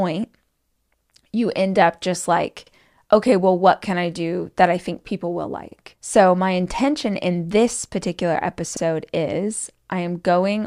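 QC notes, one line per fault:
2.67–2.72 s, 5.72–5.77 s and 8.77–8.82 s, overlapping chunks: at each join, after "end up just like" (before "okay well what can"), after "I think people will" and after "intention in this particular", about 50 ms of speech plays twice, heard as a brief stutter or click. Each new 3-second chunk begins slightly before the previous one ended. Unlike a dropout, nothing is lost; material repeats, and the regular 3.05-second spacing points to block processing rather than random glitches.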